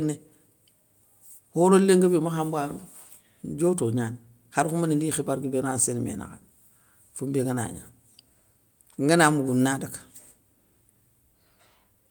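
No technical faults can be heard anywhere in the recording; the signal stays continuous and stable throughout.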